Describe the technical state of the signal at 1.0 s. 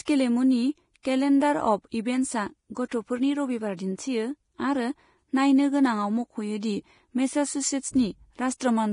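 Around 1.0 s a pre-echo runs from 1.03 to 1.05 s, spreading about 24 ms ahead of a sharp onset. The transform block containing that attack spreads its quantisation noise across its whole length, so noise sized for the loud onset also fills the quiet stretch before it. You hear a brief hiss leading into a softened, smeared attack. Because the hiss comes before the onset, it cannot be reverb or a decay tail, which only follow a sound.

Underneath, and through the whole clip, the speech carries the hissy, grainy texture of heavy compression, likely Vorbis compression at a rate that fits about 30 kbps. Nothing is present above 10.6 kHz, and the remaining treble is quantised so coarsely that fine detail has turned into noise of similar energy. Steady tones sound roughened and consonant attacks blurred. Unlike a broadband noise floor, this grain follows the signal and disappears with it.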